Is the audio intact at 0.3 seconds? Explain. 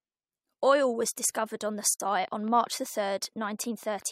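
Yes, the speech at 0.3 seconds is intact, with no dropout, click, distortion or other fault at that moment.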